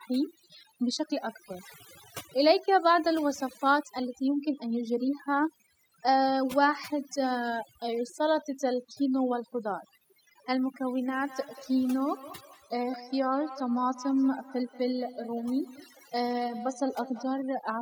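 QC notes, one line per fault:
throughout, overdone noise removal: the background sinks to near silence with twinkling specks. The noise reduction is set too strong, so frequency bands near its noise estimate get pulled down or shut off, taking quiet speech detail with them.
11.08–17.47 s, feedback echo between two devices: the speech comes back as a thin, ringing repeat roughly a fifth of a second behind, peaking about 17 dB below the speech. A second device in the room replays the call into the microphone, and the local echo canceller can't remove sound played by another device.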